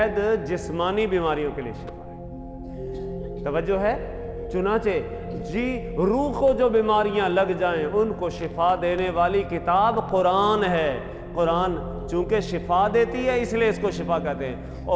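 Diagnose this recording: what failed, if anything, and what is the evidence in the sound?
Nothing failed here; no fault is audible.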